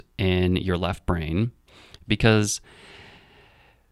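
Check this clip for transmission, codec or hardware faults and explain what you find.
No fault can be heard anywhere in the clip. There is nothing here that calls for a time or a mechanism to explain.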